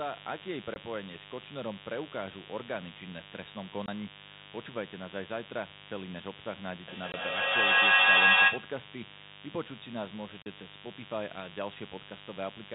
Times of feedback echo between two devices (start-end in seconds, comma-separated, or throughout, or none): 6.88-8.79